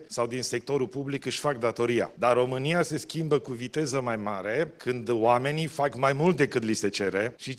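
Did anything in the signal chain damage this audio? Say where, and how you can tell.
Yes. Throughout the clip the timing never quite settles: the sound keeps stumbling with tiny, irregular hiccups rather than flowing evenly. That is clock drift between sender and receiver, at the network and jitter-buffer stage. The sending device's clock runs roughly 4 percent fast against the receiver's, so audio arrives slightly quicker than it is played out. The buffer keeps overfilling, and the receiver has to keep discarding material to stop latency from growing.

The repeated timing corrections are audible from about 0.06 s to 7.37 s as a slightly unsteady, uneven pace, with small skips scattered at irregular gaps rather than on a steady beat. Each is a short cut made by the receiver to keep up with a sender running at 104 percent speed. Because every edit removes audio in the same direction, the tempo feels unsteady, and the uneven spacing makes the skips sound like faint stutters.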